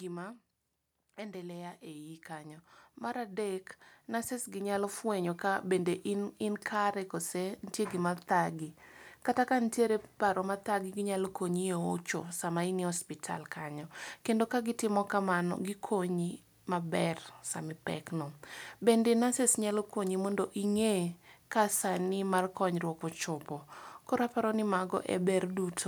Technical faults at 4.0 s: automatic gain rising

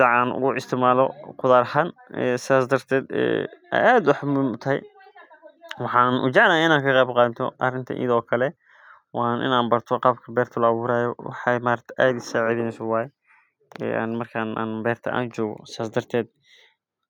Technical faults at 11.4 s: none

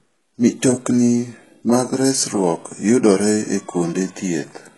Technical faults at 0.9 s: low-bitrate audio saved at a high bitrate

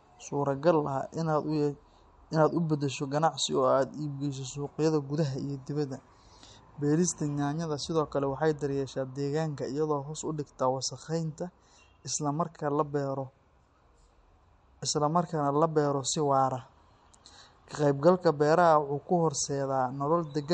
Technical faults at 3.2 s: MP3 compression

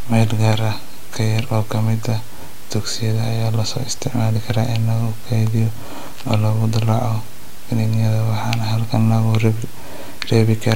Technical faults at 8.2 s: none

